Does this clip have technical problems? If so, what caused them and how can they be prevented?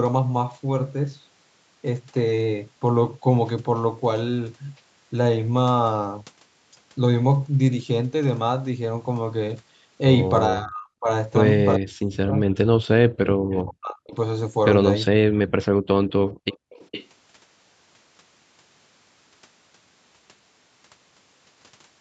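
Yes. The speech dips hard from 10.5 to 11.09 s and again from 11.76 to 14.14 s, by roughly 35 to 40 dB. This is likely speech suppressed in double talk. The echo canceller could not tell this talker from the far side's loudspeaker echo, so it turned both down. Better echo canceller tuning or headsets on both ends prevents it.

A faint delayed copy of the speech comes back at 14.1 s, about 30 dB down. A louder one runs from 16.51 to 17.07 s, about 15 dB down. Both arrive roughly 430 ms late. This is likely echo leak. A loudspeaker's sound reached a microphone and was not fully cancelled. Headphones or a stronger canceller stops it.

The room sound drops out from 15.7 to 15.87 s, by about 38 dB. It drops again from 16.33 to 16.7 s, by about 35 dB. This is background gated by the echo canceller. It clamped the microphone while the loudspeaker played, then let go. Gentler suppression settings prevent it.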